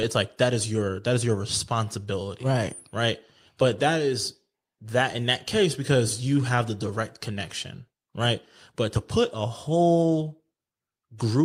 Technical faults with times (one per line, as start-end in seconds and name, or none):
none